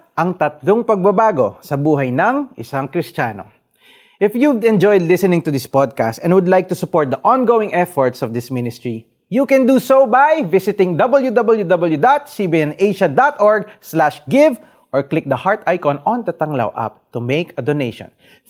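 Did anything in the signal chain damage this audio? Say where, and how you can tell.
No, nothing in the signal chain audibly damaged this speech.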